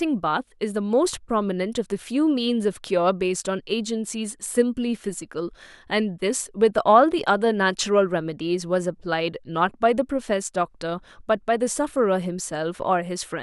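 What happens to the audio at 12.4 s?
At 12.4 s the audio runs on intact, with no dropout, click, distortion or other fault at that moment.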